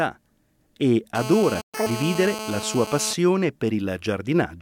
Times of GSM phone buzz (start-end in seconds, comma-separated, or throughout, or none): 1.15-3.14